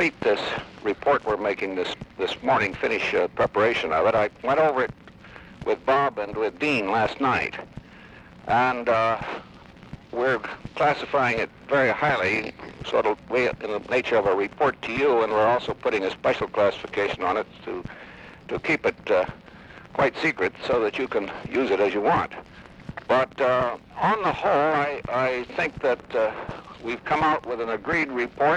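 Nothing goes wrong anywhere in this sound, so there's no fault to point to.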